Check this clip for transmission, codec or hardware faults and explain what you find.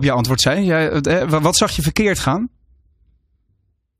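One fault turns up: an overlap between stream segments at 2.24 s, just after "wat zag je verkeerd". Two segments claimed the same stretch of time, so the player trimmed about 18 ms of speech that was never doubled, and the waveform jumps, giving a tiny skip. Unlike a dropout, no silent gap appears; the sound simply leaps ahead.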